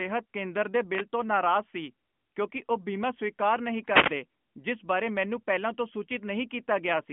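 At 0.90 to 1.05 s, after "ਕੇਂਦਰ ਦੇ", and 3.86 to 4.15 s, after "ਸਵੀਕਾਰ ਨਹੀਂ", wireless microphone noise hits sound as static swishes as the FM signal fades. Unlike a digital dropout, they bring hiss rather than silence.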